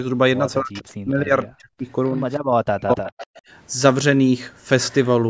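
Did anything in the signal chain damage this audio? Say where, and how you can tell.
Yes. At the call-processing stage, the echo canceller likely misjudged moments when both ends were talking at once and treated this side's speech as loudspeaker echo. It turned that speech down from 0.61 to 1.88 s, for about a second in total, and again from 2.62 to 3.12 s, for about half a second. At its deepest the level drops by about 40 dB, so the speech dips hard. This is speech suppressed in double talk.

An echo canceller also likely failed to remove everything a loudspeaker fed into its microphone, and the remainder was sent back as an echo leak. A faint copy of the speech trails 263 ms behind the original at 2.07 to 2.23 s (about 35 dB down), 3.06 to 3.41 s (about 20 dB down, the clearest) and 4.91 to 4.95 s (about 30 dB down). The loudest overlaps the end of the second dropout.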